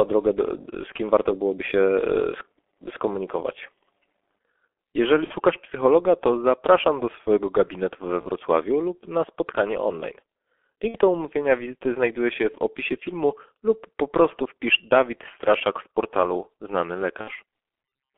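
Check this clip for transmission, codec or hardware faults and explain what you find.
Two faults are present: the whole recording passed through a G.723.1 codec, and four short gaps were filled in by VoIP packet loss concealment.

The G.723.1 codec runs throughout. This low-rate telephony coder models speech in 30 ms frames with very few bits, and here it runs at 6.3 kbit/s with heavy damage. The line band runs only from 300 Hz to 3.4 kHz, so the speech is thin and muffled. Because the vocal model is updated coarsely, the voice sounds hoarse and consonants smear together.

VoIP packet loss concealed by the speech codec occurs at 5.24–5.35 s (just before "psychologa to zapraszam do"), 8.21–8.27 s (between "do swojego gabinetu we" and "lub na spotkanie online"), 10.88–10.97 s (just before "do umówienia wizyty znajduje") and 17.21–17.32 s. The decoder lost about 60 ms of audio in the first, third and fourth gaps, which fits two missing frames, and about 30 ms in the second, which fits one. 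To fill each gap it repeated its last pitch and filter at falling gain. Each gap therefore becomes a brief buzzy tone or coloured noise that fades, and the speech stays weak for a moment after it resumes.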